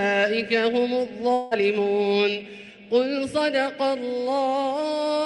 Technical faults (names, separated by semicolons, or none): long network dropout